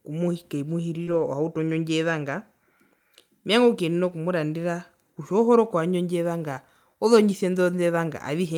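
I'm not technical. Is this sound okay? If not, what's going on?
No. This speech recording has two kinds of network trouble, both in the first few seconds and then twice more later.

The first is short concealed packet loss at about 1.03 to 1.09 s. About 40 ms of the call never arrived in time, so the receiver covered the gap by stretching out the sound it had just played, then blended back into the real audio. You hear a brief smear or wobble there, and a short consonant may disappear.

The second is a lost packet rebuilt from error correction. Overlapping the end of that gap, from about 1.07 to 1.21 s, a short run of packets went missing. Each following packet carried a cheaper backup copy, and the receiver played those instead, so roughly 80 ms sounds rougher and noisier rather than silent. The same thing happens for single packets at about 4.09 s and 7.53 s, each a quick 20 ms patch of grainy sound.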